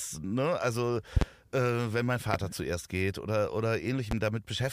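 At 1.17 to 1.24 s a loud pop arrives as a double thump, two sharp transients well above the speech, roughly 20 dB louder. A single pop follows at 2.34 to 2.37 s, after "wenn mein" and before "zuerst geht oder", at a similar level. A third, somewhat softer, lands at 4.11 to 4.14 s, just after "zuerst geht oder". Each is likely a voltage step from a switch, connector or static discharge that the downstream circuitry shapes into a short pulse. The speech continues underneath throughout.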